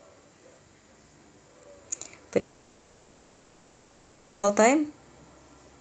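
From 2.39 s to 4.45 s, a long network dropout likely stopped the speech stream reaching the receiver, which filled the whole two-second gap by extending the last sound. What you hear is a smeared buzz fading away before the speech resumes with that stretch missing.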